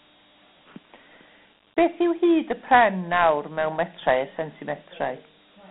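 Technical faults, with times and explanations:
Throughout, Dialogic VOX ADPCM: coarse 4-bit steps leave gritty hiss trailing the speech, band runs 150 Hz to 3.5 kHz, nothing above 3.8 kHz, fitting 32 kbps.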